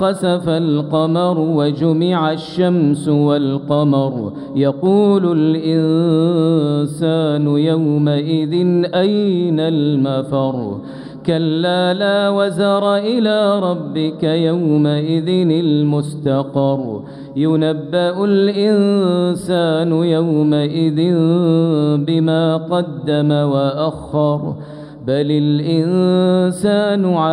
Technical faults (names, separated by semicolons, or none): channel delay (comb filtering)